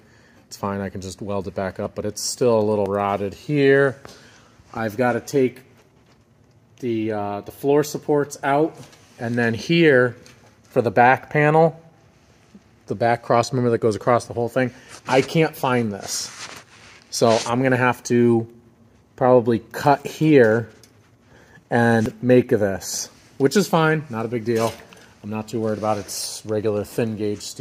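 Dropped buffers (overrun), likely, at 1.86, 2.86, 16.53, 22.06 and 26.26 s: incoming audio wasn't collected before being overwritten, so the sound jumps ahead. Each loses about 20 ms, except roughly 70 ms at 2.86 s and 40 ms at 26.26 s.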